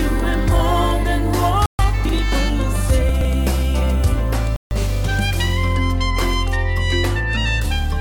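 The sound drops to dead silence twice, for 132 ms at 1.66 s and for 148 ms at 4.56 s, then resumes where it left off. This is a Bluetooth stall, most likely interference holding up packets until the headphones' buffer ran empty and playback waited for the resent data. What sets it apart from a glitch in the data itself is the clean gap: nothing is garbled or repeated, the audio simply pauses and carries on. The other fault is chunks out of order, and here there is no silence at all. At 2.05 to 2.13 s one 40 ms chunk plays one slot late, and at 3.09 to 3.25 s a 40 ms chunk turns up three slots late, after the material that should follow it. Every piece of audio is still present but in the wrong sequence, so each spot comes across as a brief jumbled stutter rather than a dropout.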